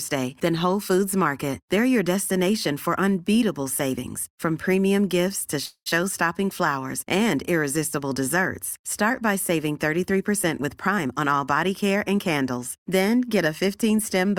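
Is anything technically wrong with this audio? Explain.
Yes, there are two faults.

From 5.65 to 6.02 s there is a call audio freeze, likely from delayed packets draining the jitter buffer. The last sound stretches into a fading buzz for about 205 ms, then goes silent for 70 ms before resuming without loss.

From 10.61 to 12.91 s there is a jitter buffer speed-up. The receiver trimmed tiny pitch-period slices, roughly a fifth of a second in total, so the speech plays about 9% faster, hurried but at unchanged pitch.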